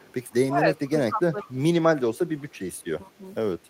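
A faint repeat of the speech trails it by 155 ms from 0.0 to 0.13 s, an echo leak likely from a loudspeaker on the far side whose echo canceller let its own microphone pickup return. Between 0.51 and 1.56 s the speech dips by roughly 15 dB in patches totalling around 0.7 s, speech suppressed in double talk, likely because the canceller turned down both talkers while both spoke. A stronger echo scrap at the same 155 ms delay appears at 1.4 to 1.45 s, likely the same leak. A deeper dip of roughly 25 dB follows at 2.08 to 2.31 s, likely the same double-talk suppression. A faint 155 ms echo returns from 2.38 to 2.84 s, likely leaking through again. A last dip of around 15 dB falls at 3.04 to 3.22 s, likely double-talk suppression once more.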